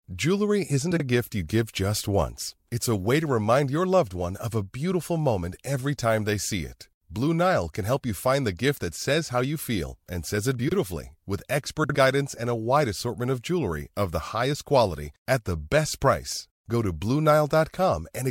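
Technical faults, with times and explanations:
0.90–1.01 s, 10.59–10.73 s and 11.83–11.95 s, frames out of order: in each spot, just before "gift you give just", just after "feel and says it" and just before "guidance and", two adjacent blocks of about 42 ms (62 ms at the third) play swapped. That produces a brief garbled flutter, and unlike a dropout, no time goes missing.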